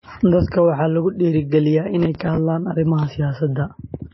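A speech recording with plainly audible MP3 compression throughout, likely from a low bitrate around 24 kbps. The treble is cut off sharply, leaving an empty spectrogram above 5.8 kHz, and weak frequency lines blink on and off between frames, giving a watery, swirly texture. From 2.00 to 2.37 s a processor overload crackle tears through the sound. Repeated missed deadlines, pointing to buffers of about 5 ms and roughly fifteen misses, are each filled with a scrap of old audio. On the waveform these show as hard-edged discontinuities, and on the spectrogram as vertical broadband streaks.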